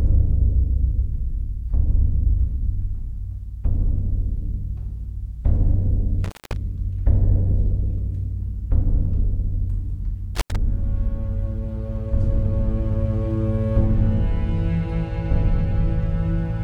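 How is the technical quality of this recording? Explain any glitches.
The recording has two brief dropouts from an intermittent contact. At 6.24 to 6.56 s the sound cuts out for about 213 ms, and at 10.35 to 10.56 s for about 85 ms, each with crackle at the edges and faint hiss in the gap: a loose cable or plug briefly opening the line.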